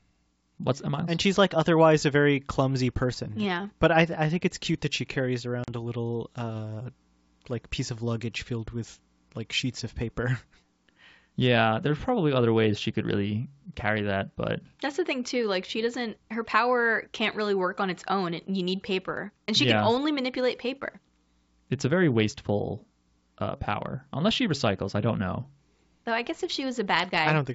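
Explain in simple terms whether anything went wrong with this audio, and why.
Packet loss on an ADPCM call cuts a hard-edged silent gap of about 40 ms into the speech at 5.64 to 5.70 s, as a couple of packets went missing. The receiving decoder had been tracking the sender's level and prediction, so it lost step with it. The speech comes back slightly distorted and settles within a few tens of milliseconds. The surrounding wideband G.722 phone sound stays clear.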